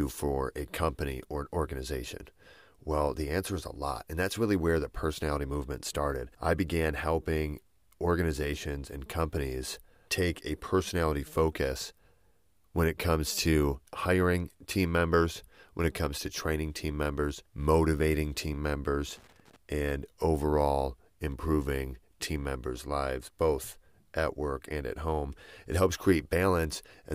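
At 19.15 to 19.56 s, a loose connector crackle: a worn contact makes and breaks, chopping the speech into an irregular burst of crackle and scratching.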